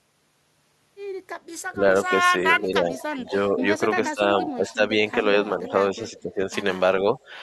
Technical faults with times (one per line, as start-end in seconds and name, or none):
1.72-7.17 speech suppressed in double talk
2.52-4.74 echo leak
5.67-6.20 echo leak